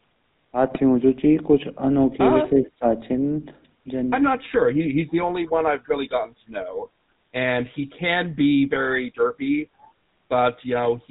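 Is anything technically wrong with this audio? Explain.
Yes. The whole clip has passed through the GSM full-rate codec, its sound fitting the 13 kbps original GSM coder. The codec models the vocal tract and drives it with sparse, regularly spaced pulses, discarding everything above 4 kHz. The voice comes out dull, buzzy and gravelly throughout.

GSM bit errors strike twice, from 0.72 to 0.80 s and from 6.62 to 6.86 s. Corrupted bits reached the decoder and scrambled its filter, pitch or gain values for a few frames, so the voice briefly breaks into squawking, popping or gargling distortion.

From 9.82 to 9.88 s a very faint, delayed copy of the voice trails the original by about 0.32 s. This is most likely an echo leak, where a loudspeaker's output reached the far-end microphone and slipped past the echo canceller.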